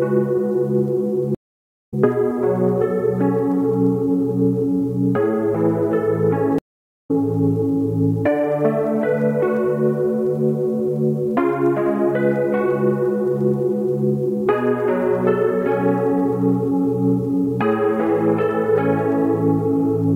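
At 1.35 s the sound cuts out for about half a second. This is a stream reconnect. The connection dropped, and the player went silent while it reconnected. A new decoder then started mid-stream. When the sound returns at 1.94 s, it has skipped ahead by roughly 0.4 s. The same thing happens at 6.58 s, with a 430 ms silence. Playback resumes at 7.11 s, again around 0.4 s further on.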